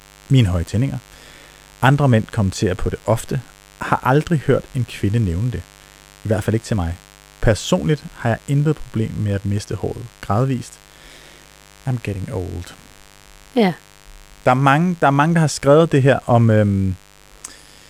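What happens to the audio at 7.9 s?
At 7.9 s the speech sits over a mains buzz that runs through the whole clip, well below the speech level. Sharp switching spikes, probably from a dimmer, rectifier or unshielded lead, enter twice per 50 Hz cycle, so the hum carries a dense stack of harmonics that gives it a raspy edge. On a spectrogram this shows as evenly spaced horizontal lines every 50 Hz climbing into the kHz range. The waveform shows a repeating 100 Hz spiky ripple in the pauses.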